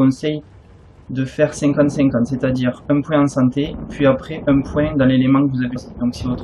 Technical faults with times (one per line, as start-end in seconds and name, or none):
5.75 damaged data in a compressed stream